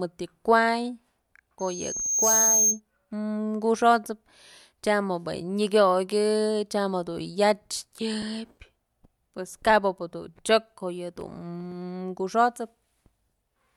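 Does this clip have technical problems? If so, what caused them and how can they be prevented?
Yes. Loudspeaker feedback squeal runs from 1.59 to 2.80 s. A single 6.4 kHz tone swells within a second to a few dB above the speech. The microphone hears its own loudspeaker, and loop gain exceeds one there. Lower the gain, reposition the microphone, or notch 6.4 kHz.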